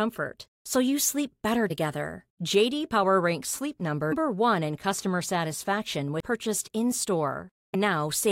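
At 1.70 s, just after "so you sleep better", the speech breaks with a brief glitch, and the same kind of blip recurs at 4.11 s, at 6.20 s after "in customer satisfaction", and at 7.74 s. Each is damaged data in a compressed stream: corrupted bytes lead the decoder to misread a frame, lose sync and hunt for the next valid header. The result is a burst shorter than 20 ms in place of the intended audio.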